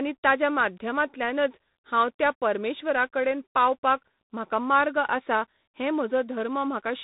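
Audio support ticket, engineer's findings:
Tandem speech coding, whole clip: rough, noisy speech, dead above 3.8 kHz. Sounds like CVSD then G.726, each coder mangling the last one's output.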